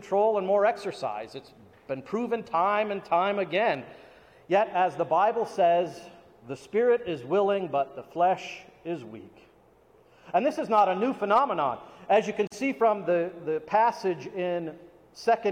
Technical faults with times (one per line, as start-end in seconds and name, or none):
12.47-12.52 gap at a join of encoded pieces